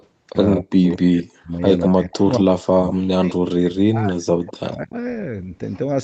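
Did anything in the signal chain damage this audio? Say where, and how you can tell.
Yes. An echo leak shows up at 0.0 to 0.06, 0.89 to 0.96, 2.31 to 2.4, 2.87 to 2.93 and 4.46 to 4.77 s as delayed copies, about 35 to 15 dB under the voice. This likely comes from an echo canceller in the call processing that let loudspeaker pickup through. The copies arrive at a fixed 184 ms (216 ms at the start), which sets them apart from the smooth decay of room reverb.

Speech is suppressed in double talk from 0.59 to 4.28 s, dipping by up to about 40 dB across roughly three seconds, and again from 4.6 to 4.96 s, by about 30 dB. The likely cause is the echo canceller ducking its own talker during overlap.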